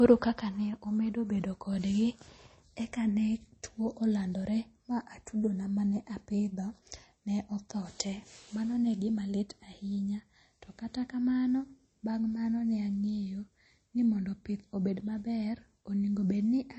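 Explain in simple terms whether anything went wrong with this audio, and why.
Throughout the speech, the sound is watery and swirly with blurred edges and dull treble, the plainly audible damage of heavy MP3 compression, likely from too few bits.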